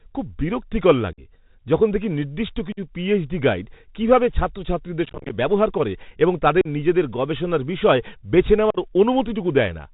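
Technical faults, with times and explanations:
Throughout: Bluetooth CVSD headset codec. The speech comes over the narrowband headset link at 64 kbit/s, one bit per sample saying only up or down with an adapting step, so nothing above 4 kHz survives. Loud, bright passages outrun the step and distort, s sounds turn scratchy, and a granular hiss sits under the voice. That grainy slope-overload texture is what sets it apart from plain band-limiting or the cleaner 8 kHz wideband headset codec.
1.13–1.20 s, 2.72–2.79 s, 6.61–6.67 s, 8.70–8.78 s: unconcealed Bluetooth headset packet loss. Each is a hole of about 40 to 50 ms, which fits a run of ten to fifteen lost short voice packets, filled with silence or an idle pattern rather than repaired. The edges are abrupt and can click, and the speech resumes briefly quieter as the CVSD step rebuilds. Concealed loss would repeat or smooth the sound instead.
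5.05–5.34 s: unconcealed Bluetooth headset packet loss, scattered. About 160 ms is lost in many short gaps spread over 0.25 s, none longer than about 26 ms, so it sounds like crackle and a rough, chopped voice rather than a single hole.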